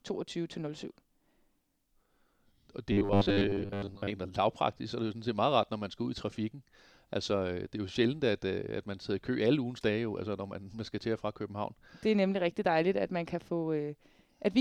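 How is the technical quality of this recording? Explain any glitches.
One clear glitch mars the recording. From 2.92 to 4.10 s, between "og det" and "lavpraktisk så det er", robotic sound from repeated short buffers turns the speech into a rigid 100 Hz buzz. This is likely from 10 ms chunks being replayed over and over for most of that stretch while fresh audio was skipped. A spectrogram would show evenly spaced 100 Hz harmonic lines, and the waveform would show identical repeating blocks.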